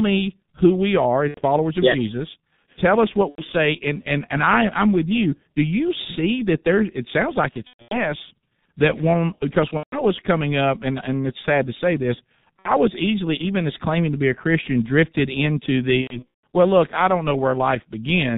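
Speech run through a G.723.1 codec the whole way, and it's heavily damaged: nothing above 4 kHz survives, so it's muffled, with a hoarse edge and smeared consonants. The slow-updating voice model and the very thin bit budget fit the 6.3 kbit/s mode. On top of that there's VoIP packet loss concealed by the speech codec at 1.28–1.41, 3.29–3.45, 7.67–8.12, 9.68–10.06, 12.60–12.72 and 16.02–16.40 s. In each gap the decoder keeps repeating its last pitch and filter at falling gain, so the sound turns into a buzzy or noisy smear that fades out, and it stays weak for a moment after real audio returns. The short gaps are about 60–90 ms, which fits two or three 30 ms frames. The longer ones, at 7.67, 9.68 and 16.02 s, are patchy runs spread over about 240–420 ms, with the longest unbroken stretch around 150 ms.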